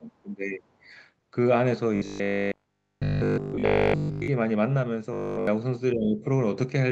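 This is a speech recording with two kinds of fault. From 0.00 to 0.66 s, and again from 5.93 to 6.26 s, the speech dips sharply, by roughly 20 dB and 15 dB respectively at its deepest. This is speech suppressed in double talk. The likely cause is an echo canceller mistaking overlapping far-end speech for echo and turning the talker down with it. From 1.96 to 4.28 s, and from 5.13 to 5.47 s, the voice becomes a rigid, metallic buzz at 50 Hz. This is robotic sound from repeated short buffers. The likely cause is audio arriving too seldom, so nearly all of it is replaced by repeats of one 20 ms chunk. The repeats impose that fixed pitch on the sound. The audio band also stops near 8 kHz, as expected from a call path.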